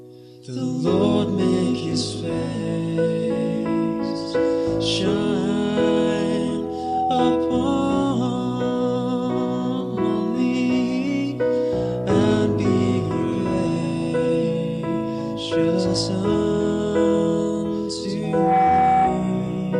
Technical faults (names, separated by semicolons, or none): loudspeaker feedback squeal